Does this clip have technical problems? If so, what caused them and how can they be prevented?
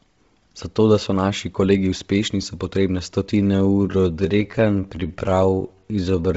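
Yes. Heavy Bluetooth LC3 compression, likely at a low bitrate around 24 kbps, strips everything above 7.7 kHz and fills the gaps with noise, giving the speech a breathy, grainy edge throughout. Preventing it means using a higher LC3 bitrate or a wired connection for recording.

A time-stretched section from 3.37 s to the end, likely from software slowing the audio to about 0.65 times its speed while preserving pitch, makes the speech drag. Prevention comes down to fitting the timing by editing rather than stretching, or keeping stretch ratios close to 1.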